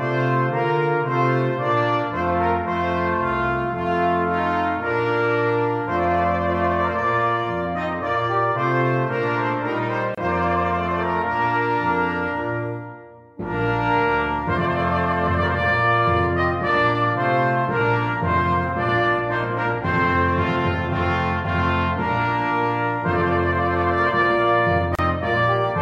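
Gaps at joins of encoded pieces open at 10.15 s (about 29 ms) and 24.95 s (about 35 ms), where separately encoded sections were spliced without trimming encoder delay and final-frame padding.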